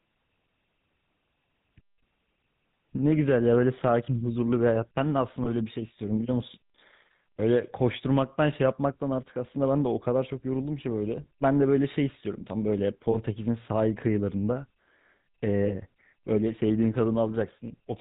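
The whole recording runs through the GSM full-rate codec. Its damage is plainly audible. The codec models the vocal tract and drives it with a coarse pulse train. Only a fraction of the excitation detail survives. That gives the speech a buzzy, gravelly edge. The band also stops at 4 kHz, so the top end sounds dull and boxy. The character fits the 13 kbps full-rate coder.

There are lost GSM frames at three points. The first is at 5.44 to 5.66 s, the second at 13.12 to 13.16 s, and the third at 15.66 to 15.70 s. Each sounds like one dropped frame of about 20 ms. The decoder fills each gap by reusing the last good frame's settings. You hear a brief, rough, metallic ring in place of the missing sound.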